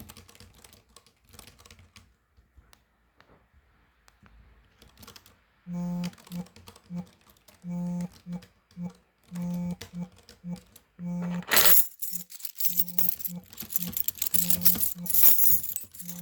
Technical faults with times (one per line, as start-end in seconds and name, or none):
11.53-11.80 hard clipping
12.65-13.09 hard clipping
13.76-15.55 hard clipping